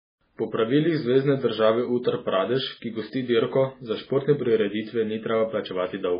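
MP3 compression is the likely cause of damage throughout the speech. Nothing reaches above 5 kHz, and the heavy watery swirl and chirping on s sounds point to a very low bitrate, around 16 kbps, where weak frequency lines flicker between frames.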